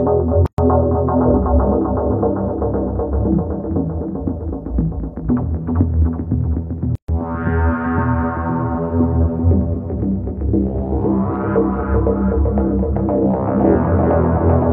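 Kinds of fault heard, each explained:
Gap at a join of encoded pieces, at 0.46 s and 6.95 s: the sound breaks off for about 121 ms and then about 130 ms, and each time it resumes exactly where it broke off. The pieces were encoded separately and joined without trimming. The encoder's start-up delay and the padding in each final frame stay in as silence. The codec smears both edges of each gap, so the truly silent part is shorter than the gap.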